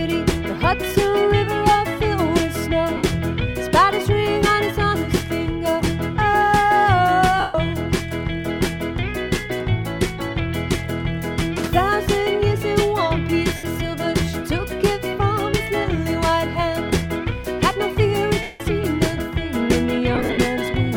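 Bluetooth LE Audio frames were lost five times, and the LC3 decoder filled each gap by repeating the last spectrum with random signs, fading it as the gap grew. The audio turns into a brief noisy smear at 2.97–3.04 s and 13.56–13.64 s, and longer fading smears at 7.40–7.55 s and 18.42–18.60 s. At 20.15–20.38 s the dropouts are scattered, the longest around 50 ms. Gap lengths fit 7.5 ms LC3 frames.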